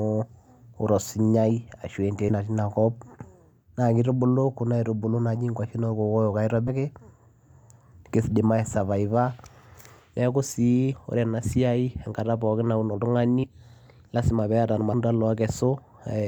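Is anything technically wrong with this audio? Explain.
Yes, compressed frames skipped at 2.28–2.34, 6.67–6.71, 10.92–10.96, 13.43–13.48 and 14.92 s. The speech jumps ahead by roughly 70 to 150 ms, consistent with 10 ms frames. Waveforms and spectrograms show abrupt discontinuities.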